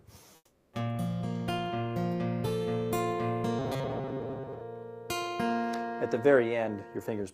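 The audio carries two separate faults. From 0.35 to 0.73 s, about 0.38 s, comfort noise in place of the background appears: the real background, which sits about 33 dB below the loud parts, gives way to a flat, featureless hiss about 5 dB quieter. The likely cause is discontinuous transmission of the kind Opus DTX uses, where the sender goes quiet and the receiver synthesises noise. Unlike a plain dropout, the gap is filled rather than silent, and unlike a noise gate, the fill has no texture of the original room. From 3.59 to 4.61 s comes robotic sound from repeated short buffers: a rigid metallic buzz at 134 Hz, with most of the audio in that stretch replaced by repeats. The likely cause is late-arriving audio being padded by looping a buffer of about 7.5 ms, which sets the buzz pitch. Unlike ordinary codec warble, the pitch stays fixed and mechanical while only the rough contour of the sound survives.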